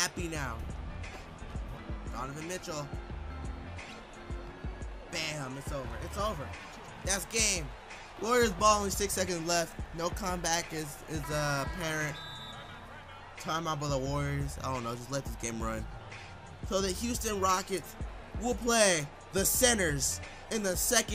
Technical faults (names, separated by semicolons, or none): none